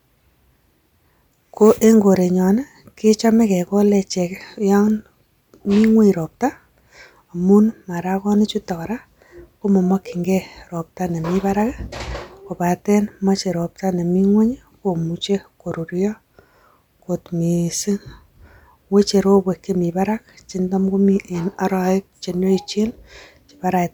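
No technical faults can be heard anywhere in the recording.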